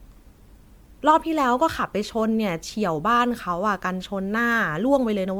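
Generation loss runs through the whole speech clip: swirly, smeared, hollow tone with blurred attacks, likely from roughly ten successive MP3 re-encodes near 128 kbit/s, band-limited below 19.9 kHz.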